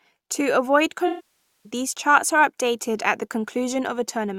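From 1.07 to 1.70 s the speech smears into a hollow, noisy wash that decays toward silence, then fades back in just before "these charts are updated". This is AAC frame loss with concealment: about 0.58 s of frames went missing, and the decoder rebuilt the gap from the last good spectrum, fading out as the loss continued.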